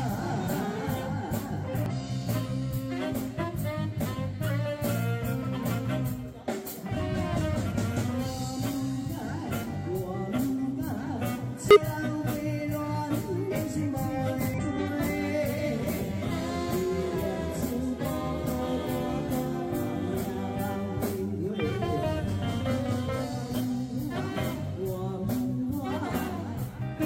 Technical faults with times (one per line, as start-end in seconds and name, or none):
1.86-1.92 damaged data in a compressed stream
6.88-6.93 damaged data in a compressed stream
11.71-11.77 damaged data in a compressed stream
13.47-13.52 damaged data in a compressed stream
14.54-14.59 damaged data in a compressed stream